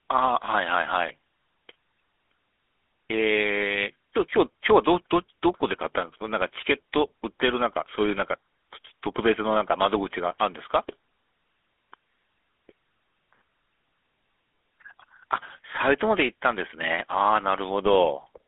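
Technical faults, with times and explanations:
Throughout, GSM full-rate codec: speech sits within 200 Hz to 3.5 kHz with plain buzzy, gravelly roughness from sparse pulse excitation, unlike the clean dullness of simple band-limiting.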